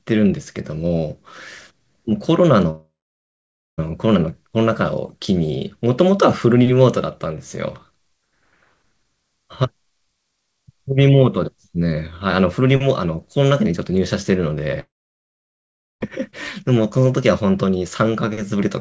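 At 2.70 to 3.80 s and 14.80 to 16.03 s, the sound smears into a fading buzz, then about 0.9 s and 1.1 s of silence: likely a long network dropout, with the lost audio never returning.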